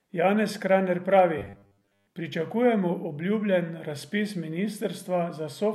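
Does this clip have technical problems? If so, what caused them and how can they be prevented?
Yes. From 1.38 to 2.09 s, audio likely arrived too slowly, so short buffers were repeated in place of most of the real signal, producing robotic sound: a rigid 100 Hz buzz, which fits a repeated buffer of about 10 ms. Giving the audio path a larger buffer or more processing headroom so data keeps arriving on time would prevent it.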